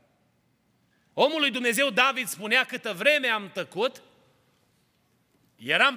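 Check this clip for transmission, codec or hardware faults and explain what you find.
One fault is present. From 0 to 2.2 s, ending just before "spunea câtă vreme am", crude rate conversion, a linear-interpolated 32 to 48 kHz step, adds a gritty inharmonic fizz about 25 dB down. A spectrogram shows faint mirrored images above 16 kHz tracking the speech.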